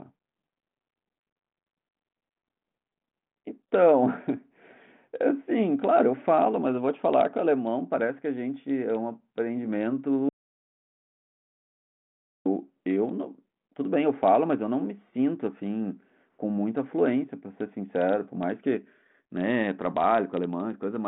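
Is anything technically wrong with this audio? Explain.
Yes. The speech, carried through a telephone-band G.726 path with nothing above 3.8 kHz, has one audio dropout to silence. From 10.29 to 12.46 s, about 2.17 s, the speech stops dead and returns mid-flow, likely because the input link failed while recording continued writing zeros. There's no room tone in the gap. The waveform shows a flat line and the spectrogram a blank column.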